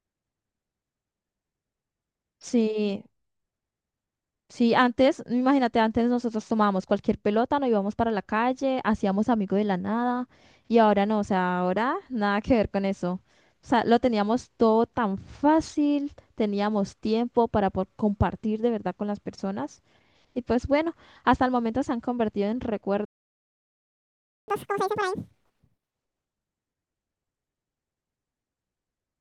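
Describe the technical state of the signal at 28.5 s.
At 28.5 s the speech signal is intact, with no dropout, distortion or other fault audible at that moment.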